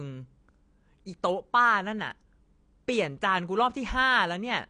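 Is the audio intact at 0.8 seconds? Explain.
No, at 0.8 seconds the speech carries AAC compression damage that runs through the whole clip, likely from AAC-LC at a low bitrate around 32 kbps. Coarse quantisation leaves it dull and smeared, and a spectrogram shows a hard ceiling at 9.8 kHz.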